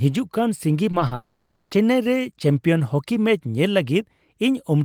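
Right after "ᱠᱟᱱ ᱥᱤᱸᱜᱤ" you get a run of short concealed packet loss: three little gaps at 0.91 to 0.95 s, 0.99 to 1.03 s and 1.07 to 1.13 s, the first two about 20 ms each and the last about 40 ms. Each time, a chunk of the stream didn't reach the decoder in time, so it patched the hole by stretching the preceding sound and then blending back in. You hear it as a quick smear or wobble.

Then at 1.15 s things go properly wrong, with what's likely a long network dropout lasting until 1.73 s, roughly 560 ms. Nothing real gets played in that stretch. The receiver keeps extending the last bit of sound as a buzzy or hissy continuation that fades rather than cutting to silence. When the speech returns at 1.73 s it just carries on from there, and whatever was said in that half second is simply gone.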